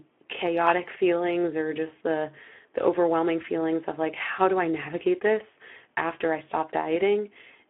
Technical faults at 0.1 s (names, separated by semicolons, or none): Speex codec